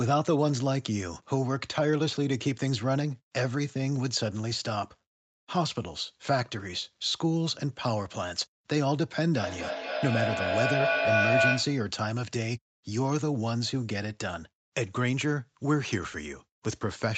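From 9.33 to 11.94 s, a feedback howl builds up. Two devices in the same room were joined to one call, so the microphone picked up the loudspeaker and each trip around the loop came back louder than the last. The repeats grow instead of dying away and narrow to a tone near 700 Hz, peaking at about 3 dB above the speech. The loop's delay is roughly a fifth of a second, and the howl lasts until it breaks off.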